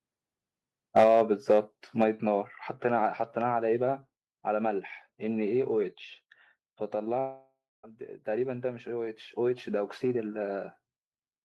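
Harsh, crackling distortion hits the loudest speech peaks at 0.96–1.22 s, 1.50–1.59 s and 2.01–2.04 s, and this is likely microphone overload. The input was driven into the converter's ceiling, flattening the waveform tops: by about 7 dB in the first burst, with roughly 7% of samples squared off, and by about 2 dB and 3 dB in the later two, with roughly 4% clipped in each. Right inside or after the distortion, the whole signal, voice and background together, drops abruptly at 1.04 s and again at 2.04 s, by about 4 dB each time. That pattern points to the microphone volume being stepped down, with the call software reacting to the clipping by cutting the input gain in single jumps, so the level staircases downward rather than easing off. Later, from 7.19 s to 7.85 s, the sound smears into a buzz or hiss that fades away, followed by about 0.23 s of silence before the audio resumes. This is likely a long network dropout. 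Roughly 0.64 s of audio never arrived, and the receiver stretched the last received sound to cover the gap until that extension ran out. When playback picks up again, it continues from a later point, so that stretch of speech is simply missing.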